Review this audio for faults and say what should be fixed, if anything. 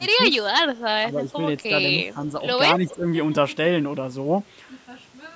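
Speech suppressed in double talk occurs at 0.0 to 0.06 s, 1.07 to 1.31 s and 2.74 to 3.06 s, where the level dips by about 10 dB, about 5 dB and about 10 dB respectively. The likely cause is the echo canceller meeting overlapping talk. It cannot tell the near talker from loudspeaker echo, so it pulls down the whole signal, and the talker briefly sinks. Preventing it means tuning the canceller's double-talk detector to hold near-end speech when both sides are active.

Echo leak appears at 2.89 to 2.96 s as a faint delayed copy of the sound, trailing by 177 ms at about 20 dB below the main level. It is likely residual echo that the canceller failed to remove from its microphone pickup and sent back down the line. It arrives inside the double-talk dip, where the canceller was already struggling. Preventing it means improving echo path modelling or adding stronger residual echo suppression on the loudspeaker side.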